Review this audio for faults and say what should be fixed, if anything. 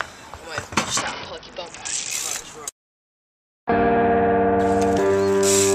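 A Bluetooth SBC bit pool drop runs from 1.01 s to 2.11 s. The link appears to have become congested, and the sender cut the SBC bit pool to keep the stream alive. The sound suggests a fall from a bit pool of around 31 to around 7, near 61 kbps. With so few bits, the highest sub-bands are starved and the rest are coarsely quantised. The treble goes dull and a gritty noise rises until the rate recovers at 2.11 s. To prevent it, reduce radio congestion or keep the source close to the receiver, or use a wired or higher-quality codec path so the encoder never has to shrink its bit budget.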